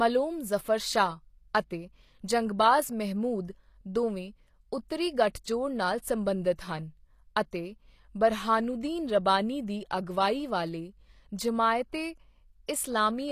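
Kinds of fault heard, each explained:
HE-AAC compression: Audible codec damage throughout most likely comes from HE-AAC at a low bitrate, fitting about 24 kbps, where the treble is rebuilt from copied lower bands. The speech's upper range sounds synthetic, gritty on sibilants, with nothing above 14.9 kHz.
pre-echo: The transform codec spread quantisation noise across a block containing a sharp attack, so noise meant for the loud onset leaked into the quiet moment before it. At 12.67 s a brief hiss of about 19 ms smears the attack.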